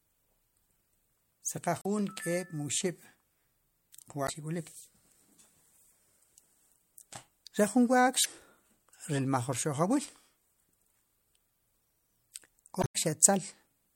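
Short chirps or squawks break into the speech after "si qa" at 1.79–1.86 s, then at 4.25–4.30, 8.22–8.26 and 12.80–12.96 s: damaged data in the compressed stream, where garbled frames made the decoder lose sync.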